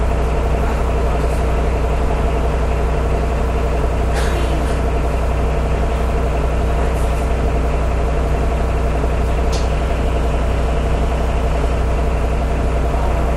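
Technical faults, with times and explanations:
There are no technical faults in this audio, so there are no times or explanations to give.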